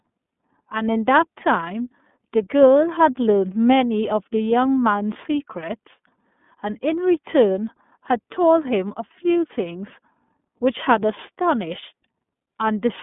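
The whole speech clip runs through the iLBC codec. It's squeezed into a 200 Hz to 3.5 kHz line band with nothing above 3.7 kHz, and the rough, synthetic grain fits 30 ms frames at about 13.3 kbps.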